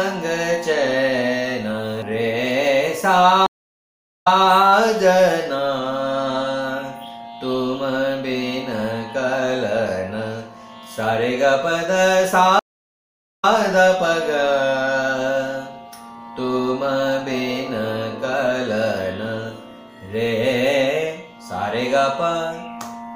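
The audio has two stream reconnects. At 3.46 s the sound drops out for 0.74 s and returns at 4.47 s. At 12.59 s it goes silent for 0.79 s and resumes at 13.51 s. Each time the link failed, playback stalled, and a new decoder picked up partway through the stream. Both restarts land slightly behind where the sound stopped: 0.26 s earlier the first time, 0.13 s the second. This is the server resending recent audio, so a short stretch is heard twice.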